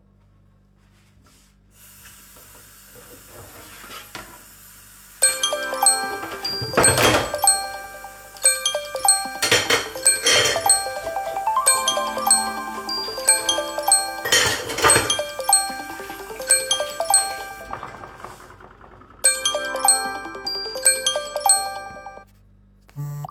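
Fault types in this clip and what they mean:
No faults are audible anywhere in this audio.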